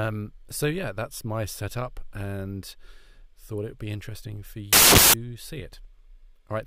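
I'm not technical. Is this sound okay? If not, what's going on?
No. From 4.73 to 5.14 s, samples built from the wrong bytes: the playback put each sample's pieces together wrongly, so the sound turns into a burst of broadband noise.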